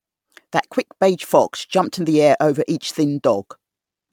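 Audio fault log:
throughout, generation loss: swirly, smeared, hollow speech with blurred attacks, likely from about ten MP3 re-encodes near 136 kbit/s, each shifting frame grid compounding noise.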